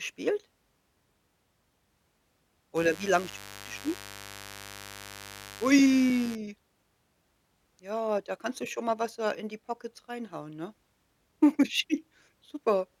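From 2.76 to 6.35 s a steady, raspy mains buzz sits under the speech, roughly 20 dB below it. Switching spikes at 50 Hz mains leak in, and a spectrogram shows evenly spaced horizontal harmonic lines stacked up into the kilohertz range.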